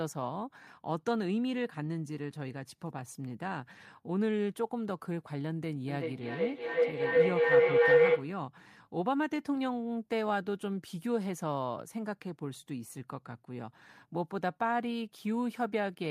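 Feedback howl from 5.88 to 8.37 s in this speech clip: a loop between two devices in one room keeps gaining level each trip, with repeats roughly every 0.4 s, narrowing to a tone near 500 Hz that peaks about 10 dB above the speech.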